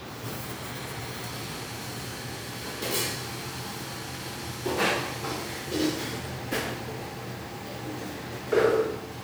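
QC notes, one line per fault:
No faults found.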